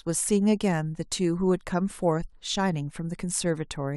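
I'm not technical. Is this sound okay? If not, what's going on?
Yes, this sound is okay, and nothing is going wrong in it.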